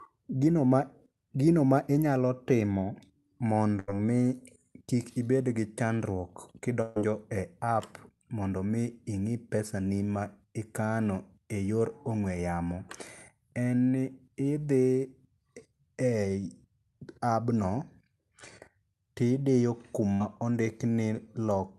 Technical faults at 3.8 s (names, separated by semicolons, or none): burst of packet loss